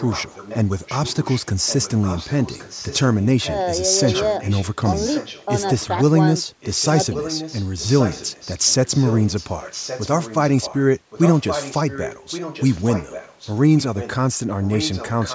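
Speech in which a faint second copy of the voice trails the original by about 1.12 s, a clear echo leak, likely from a loudspeaker on the far end whose echo canceller let part of the voice back into its microphone. It runs from 0.0 to 3.64 s, 3.98 to 5.46 s, briefly at 5.77 s, then 6.36 to 14.15 s and 14.62 s to the end. It sits roughly 15 dB down early on, much fainter around 5.8 s, and louder, roughly 10 dB down, from 6.36 s. Room reverberation would smear directly into each sound; this is a distinct, delayed repeat.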